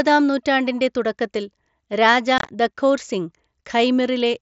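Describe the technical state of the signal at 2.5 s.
Unconcealed Bluetooth headset packet loss runs from about 2.38 to 2.49 s, just after "നൂറ്റാണ്ടിൻ്റെ തുടക്കത്തിൽ രാജാ" and before "ദഖോർ സിംഗ്". About 75 ms of few-millisecond voice packets vanished across roughly 105 ms, the longest gap 22.5 ms, leaving abrupt holes that chop the speech. Only silence or an idle pattern fills them, unlike concealed loss, which smears or repeats sound across the gap.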